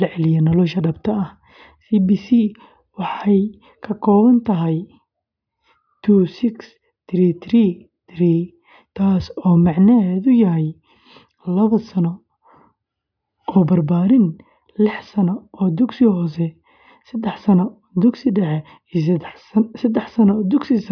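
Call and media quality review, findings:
No transport, capture or playback faults were detected on the speech path, and the signal holds steady with no dropouts, discontinuities or timing disturbances to log.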